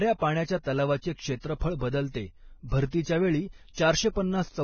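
From start to finish the speech is band-limited, with nothing above 6.6 kHz, and what remains in the upper range is hissy and granular. Consonants come across smeared at their onsets, and tonal parts of the voice have a rough, grainy edge. This pattern points to heavy Vorbis compression, likely at a low bitrate of roughly 18 kbps: the encoder has lowered its cut-off and quantised the treble so coarsely that fine detail has turned into noise-like texture.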